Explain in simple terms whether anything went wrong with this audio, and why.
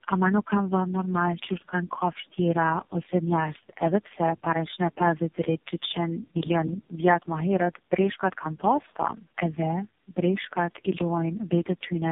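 The speech sounds rough, muffled and warbly from start to finish, with nothing above about 3.8 kHz. This is tandem speech coding: the sound passed through three speech codecs in a row, and each one squeezed the already damaged result again.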